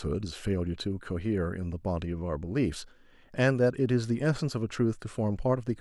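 No technical faults occur at any point in the recording, so there is nothing to describe in time order.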